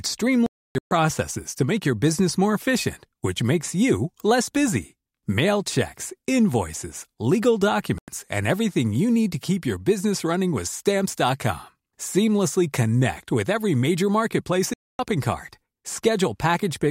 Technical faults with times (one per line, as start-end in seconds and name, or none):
0.46-0.91 digital broadcast dropout
7.98-8.08 digital broadcast dropout
14.73-14.99 digital broadcast dropout